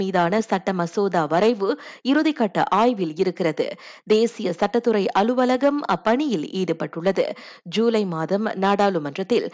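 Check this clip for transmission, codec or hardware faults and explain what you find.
Nothing stood out on listening to this speech recording that would point to a transmission, codec or hardware problem.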